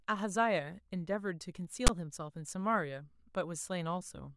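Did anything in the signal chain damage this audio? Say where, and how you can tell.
Yes. At 1.87 to 1.89 s the speech is broken by a brief hard-edged rasp, the file tags played as audio fault, which points to storage or file handling. A block of text metadata was decoded as samples, so character bytes became a loud buzzing burst sitting off-centre, and its zero padding then fell to dead silence. On the waveform this is a lopsided block offset from the axis, then a flat line. On a spectrogram it is a sharp broadband vertical stripe.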